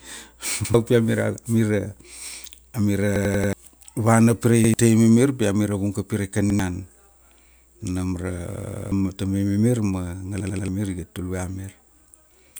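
A stutter at 0.65, 3.16, 4.64, 6.50, 8.55 and 10.40 s: each is a repeated buffer, where a 93 ms slice (fitting a 4096-sample buffer) replays when fresh audio arrives late. It replays once at 0.65, 4.64 and 6.50 s, three times at 10.40 s, and four times at 3.16 and 8.55 s, with a hard join at each repeat, and the sound skips ahead afterward.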